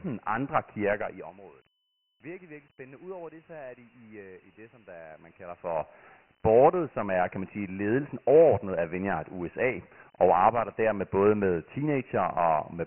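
Dialogic VOX ADPCM coding runs through the whole speech clip. The band stops near 3.1 kHz, which fits 4-bit ADPCM at 6,000 samples a second, about 24 kbps, and the heavy quantisation leaves a gritty hiss clinging to every phrase.

Zipper noise appears from 0.93 to 1.39 s. The level drops by about 20 dB in bare 4 dB steps at roughly ten per second with no smoothing, so each step clicks and a ticking rides on the fade. It returns from 5.11 to 6.04 s, between "øh i det som" and "boardet som er kan", as a rise of about 20 dB in 2 dB steps, again roughly ten per second, giving a finer but audible zipping.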